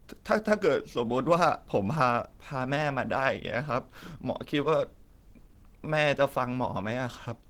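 Throughout the speech there is a hoarse, grainy roughness and a muffled edge, even though the sound reaches up to 20.2 kHz. There is less swirling, watery gapping than MP3 would give. This is likely Opus compression in hybrid mode, which fits a rate around 16 kbps.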